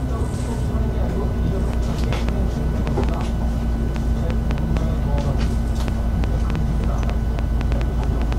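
From 1.74 s to 8.34 s, a train of clicks runs over the sound. Around thirty similar pops arrive at about 4.25 per second, unevenly spaced. They stand roughly 15 dB above the signal and tick through quiet moments too. Interference or a faulty connection or power supply is the likely cause.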